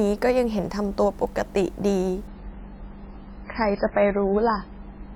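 At 2.27 s the speech drops abruptly to a much lower quality and stays there to the end of the clip, with no gap at the switch. This is an adaptive stream at a lower bitrate: the player has fallen back to a cheaper encoding, likely because the connection slowed. Nothing is left above about 5.2 kHz, so sibilants go dull, and the remaining band sounds swirly and synthetic, which fits MP3 at around 16 kbit/s after a start nearer 128 kbit/s.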